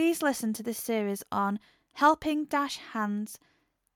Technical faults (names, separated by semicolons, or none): none